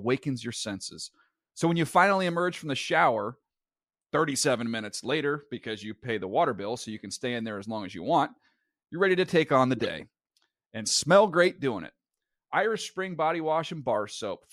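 Speech with corrupt frames decoded: damaged bits played as misplaced spectral energy, giving brief bursts around −20 dBFS at 9.77–9.87 s after "to take on the" and 13.93–13.96 s.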